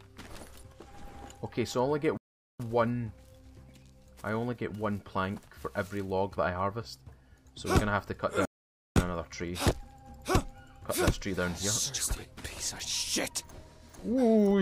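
The player most likely ran short of buffered data or had its output thread held up, causing a playback stall twice: the audio cuts to silence mid-flow for about 0.42 s from 2.17 s, then about 0.5 s from 8.45 s, before resuming.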